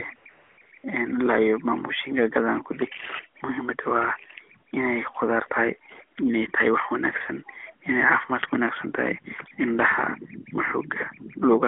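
AMR comfort noise fills 0.16–0.26, 0.30–0.58, 0.62–0.72 and 0.78–0.84 s. With speech frames halted, the real background gives way to a smooth synthetic hiss, not silence as a dropout would leave.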